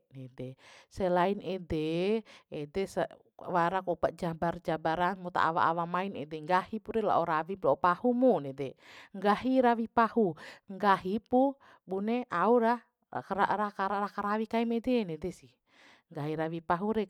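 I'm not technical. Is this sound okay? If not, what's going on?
Yes, nothing stood out as a problem when listening to this recording.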